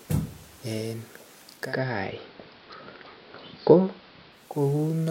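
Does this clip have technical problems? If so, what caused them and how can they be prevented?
Yes. Between 1.51 s and 4.60 s the receiver does a digital radio blend to analogue, a 286 ms cross-fade into the AM broadcast and back. Hiss rises to about 30 dB below the speech, with level unchanged. A better antenna or placement keeps digital reception above the blend threshold.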